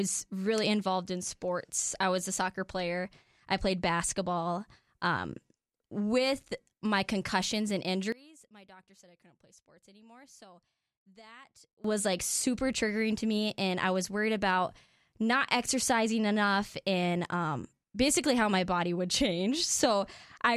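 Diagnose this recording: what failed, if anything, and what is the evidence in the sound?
From 8.12 s to 11.84 s the speech drops by about 25 dB, leaving only a faint residue. The cause is likely one channel inverted in the analogue wiring: with reversed polarity, the centred content cancels when left and right are summed to mono.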